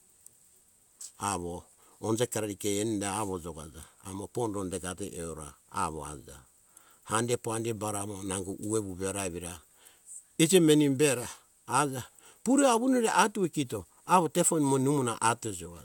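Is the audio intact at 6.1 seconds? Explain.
Yes, at 6.1 seconds the speech runs through intact, with no dropout, click, distortion or other fault audible at that point.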